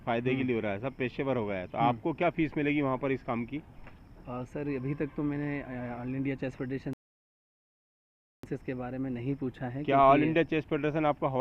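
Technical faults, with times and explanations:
6.93–8.43 s, rebuffering stall: playback halts into silence for 1.5 s as the player waits for data, then resumes exactly where it stopped; unlike a dropout, nothing is skipped.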